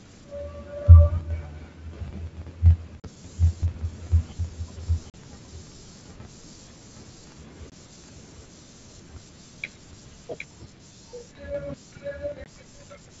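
At 3.0 s, 5.1 s, 7.7 s and 12.44 s, packet loss on an ADPCM call punches abrupt silent gaps of 40, 40, 20 and 20 ms, each a packet or two. The decoder's predictor and step size lose track, so the speech resumes slightly distorted before settling.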